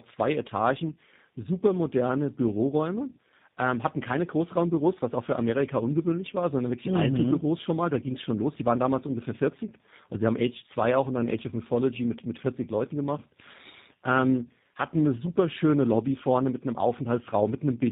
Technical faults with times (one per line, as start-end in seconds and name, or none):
0.00-17.91 tandem speech coding